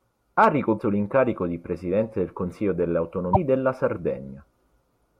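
Speech, with damaged data in a compressed stream at 0.76–0.80 s, just before "l'incarico di", and 3.33–3.37 s: the decoder loses sync and searches for the next frame header.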